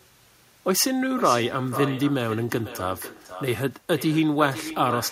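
From the very start and right through to the end, the speech has echo with no canceller on it. Every phrase comes back about half a second later, roughly 13 dB quieter, sounding thinner than the original. What's happening is that the far end is playing the call out of a loudspeaker, its microphone is catching that playback, and nothing is subtracting it before it's sent back down the line.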